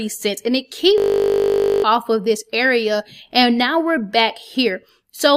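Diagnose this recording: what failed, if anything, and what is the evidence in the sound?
A system hang loop at the driver or buffer stage. From 0.98 to 1.84 s, a 20 ms fragment repeats, giving a steady 50 Hz buzz. About a second of audio is lost.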